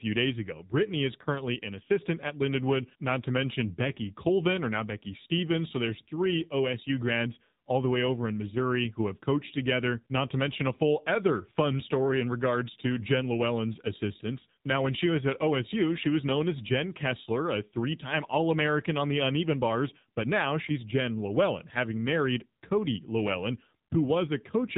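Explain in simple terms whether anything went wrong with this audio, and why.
AMR narrowband mobile codec damage runs through the whole clip. This phone codec squeezes speech into a simple model of the throat and mouth, rebuilt every few milliseconds, and drops everything above about 3.8 kHz, so the speech sounds muffled, buzzy and plainly synthetic.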